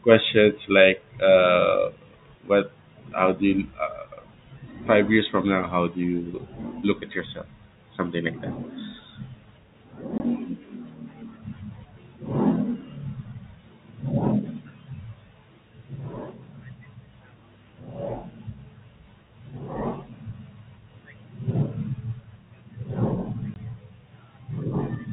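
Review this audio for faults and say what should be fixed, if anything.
Packet loss filled with silence cuts the speech at 10.18 to 10.20 s and 23.54 to 23.56 s. Each 20 ms gap fits two 10 ms packets and has hard edges, unlike concealment, which smears or repeats sound. Adding packet loss concealment and a jitter buffer on the receiving end would bridge such holes.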